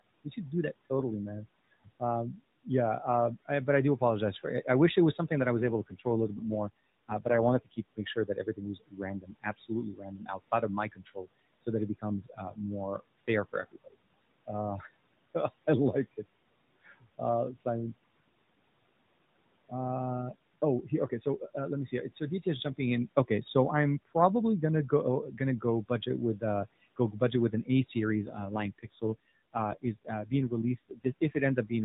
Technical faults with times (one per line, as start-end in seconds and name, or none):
1.84-17.66 speech cut by the noise suppressor
5.59-7.84 AMR rate drop
20.89-31.71 speech cut by the noise suppressor
28.16-31.40 AMR rate drop